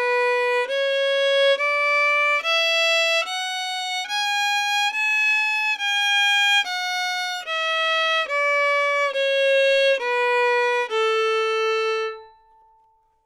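No technical faults can be heard anywhere in the audio.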